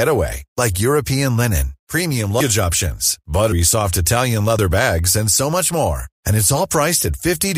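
At 2.39 to 2.43 s, 3.51 s and 4.58 to 4.60 s, compressed frames are skipped: whole coded frames never reach the output, so the speech jumps ahead by about a tenth of a second twice, then a sliver.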